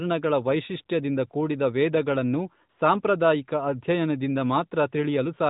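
From 2.70 to 2.78 s, between "ವೈಶಿಷ್ಟ್ಯದಿಂದ ಕೂಡಿದ ವೇದಗಳನ್ನು" and "ಸಾಂಪ್ರದಾಯಿಕ ಅಧ್ಯಯನದಿಂದ", AMR comfort noise takes over for 80 ms. The sending phone treated this stretch as silence and stopped sending speech frames. The receiver filled the gap with synthetic noise built from a rough outline of the background. The real room sound drops out. A smooth, even hiss switches in, then switches off as speech returns. The band stays capped at 4 kHz throughout, which points to AMR narrowband.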